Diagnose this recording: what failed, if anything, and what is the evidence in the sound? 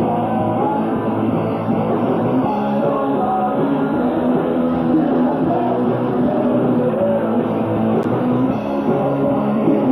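A Bluetooth SBC bit pool drop hits the codec stage from 4.68 to 6.49 s. The treble goes dull and a gritty noise rises, then clears. That fits a bit pool cut from 31 to 13, near 94 kbps. High sub-bands starve and the rest quantise coarsely.

A block of digital silence appears at 8.03 s, in the driver or buffer stage. It is a 10 ms hole heard as a tick or dip. The output buffer likely was not filled in time, so zeros played.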